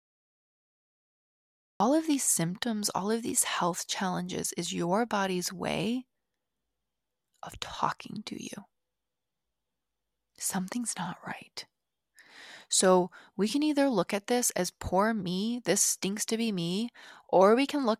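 Cut-off start at 1.80 s: the speech recording opens on digital silence, then enters mid-sound with no natural attack, because capture began after the talker had already started.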